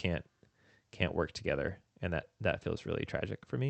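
No technical faults are audible in the speech. The sound carries the character of a call path, with the high frequencies cut off at 8 kHz, which fits an Opus codec working at a fairly generous bitrate.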